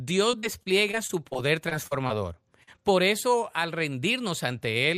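From 0.31 to 2.11 s the speech turns choppy, with small pieces of sound dropping out one after another. This is repeated packet loss: about ten holes, the longest around 39 ms, add up to roughly 240 ms of missing audio, about 14% of that stretch. Each hole is patched by extending the sound just before it, and the next one comes before the voice can settle.

At 2.63 to 2.69 s there is a brief smear, a quick wobble in the speech. This is short concealed packet loss: about 40 ms of audio failed to reach the decoder in time, and the receiver filled the hole by continuing the preceding sound before blending back into the real signal.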